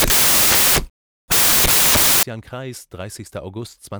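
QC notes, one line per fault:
0.00–2.23 s, samples built from the wrong bytes: from the start until 2.23 s the speech is replaced by loud, harsh broadband noise, because each sample's bytes are assembled wrongly, so the rapidly fluctuating low-order bits land in the high-order positions and dominate every value. The waveform there is a dense block of large values. The spectrogram shows energy spread across all frequencies, with no formants, until clean speech resumes at 2.23 s.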